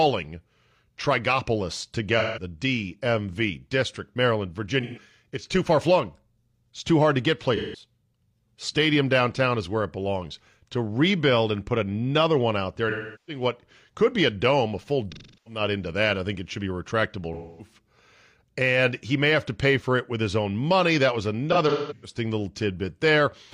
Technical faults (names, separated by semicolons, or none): AAC frame loss with concealment